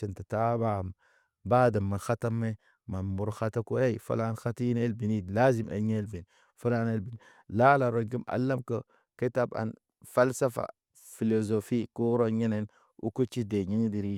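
No technical faults can be heard anywhere in the recording. The speech runs without any break or disturbance to the signal.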